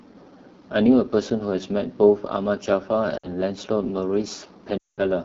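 From start to finish the speech has a rough, raspy edge, with a thin hiss filling the top of the band. That is the AMR wideband (HD Voice) codec at one of its lowest rates, which fits 8.85 kbit/s, too few bits to model the voice cleanly.

At 3.18 s, for about 0.14 s, the sound wavers and dips, then returns briefly rough. Lost AMR speech frames, fitting three 20 ms frames, made the decoder repeat the last good settings at falling gain. From 4.77 to 5.03 s a longer run of about 0.2 s drops the sound to near silence within two frames.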